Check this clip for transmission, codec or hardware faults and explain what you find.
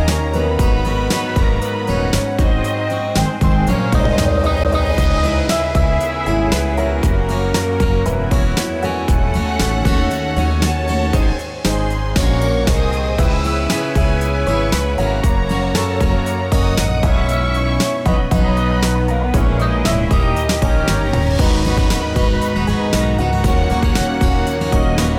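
One hardware fault appears. At 4.64 s, a CD skip: the laser jumps tracks, mutes very briefly with a tick, then resumes elsewhere, unlike a dropout, which resumes in place without jumping.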